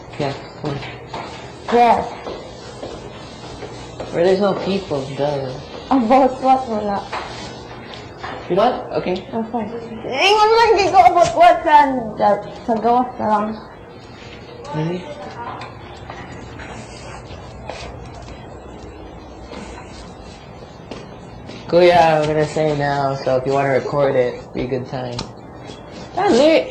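At 8.55 to 8.60 s and again at 25.64 to 25.69 s, the audio jumps forward as compressed frames are skipped. The decoder never plays a short run of frames, so roughly 150 ms of material is lost each time. That fits about three frames of 46.4 ms. At each join the sound resumes slightly ahead of where it left off.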